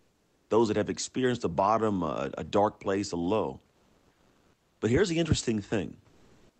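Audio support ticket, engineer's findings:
Comfort noise in place of the background at 0.0–0.49 s (before "those that have experienced"), 3.71–4.81 s (after "dark place a low"), and 6.09–6.6 s (after "here's the interesting"). Room tone becomes steady featureless hiss: about 2 dB quieter, then level-matched, then about 8 dB louder. Likely Opus DTX: sender stops in pauses, receiver synthesises filler noise.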